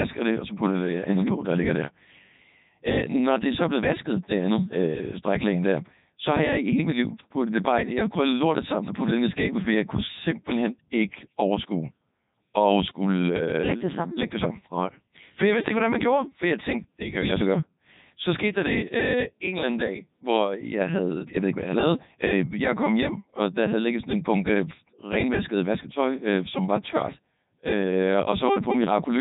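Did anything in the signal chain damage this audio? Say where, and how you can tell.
Yes, at the codec stage: speech is robotic and buzzy throughout, a Codec 2 vocoder rebuilding it from sine waves. That fits the 3.2 kbit/s mode, and it buzzes rather than warbling like a waveform codec.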